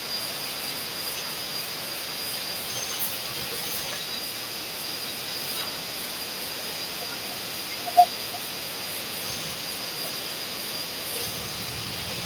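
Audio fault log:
5.33–5.83 s and 6.22–6.83 s, echo leak: a second copy of the speech trails the original by 149 ms, sitting roughly 10 dB below it. The likely cause is a far-end echo canceller that let part of the loudspeaker pickup through and sent it back. A fixed delay long enough to hear as a separate repeat, present in two brief bursts, points to echo leak rather than room reverberation, which would smear continuously instead of repeating.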